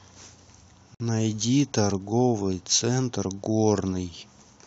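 The speech is interrupted by a gap at a join of encoded pieces, a hole of about 56 ms from 0.95 to 1.00 s. The edges are smeared by the codec, and the speech picks up exactly where it stopped. The pieces were evidently encoded separately and concatenated untrimmed, so each encoder's start-up delay and final-frame padding remain as silence. The pieces appear to be about 4 s long, so only this one join falls within the clip.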